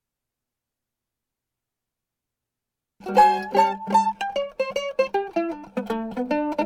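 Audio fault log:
Nothing stood out on listening to this music.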